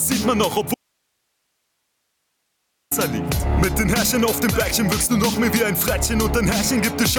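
Gain pumping runs throughout: a swing of roughly 5 dB, likely from excessive gain driving a fast limiter, visible as a breathing waveform envelope. From 0.74 to 2.91 s, an audio dropout to a faint residue cuts the signal abruptly for 2.17 s, leaving only hiss about 55 dB down, likely a lost input; the spectrogram shows a sharp-edged band of faint hiss.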